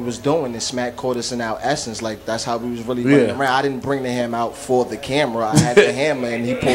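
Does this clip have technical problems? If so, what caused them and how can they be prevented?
No, there are no technical problems to report here.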